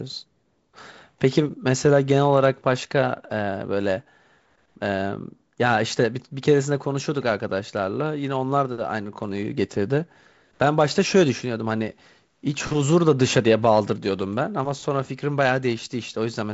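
No technical faults are audible.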